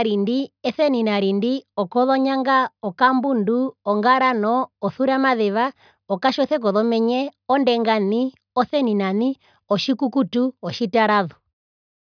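No technical faults can be heard anywhere in the recording.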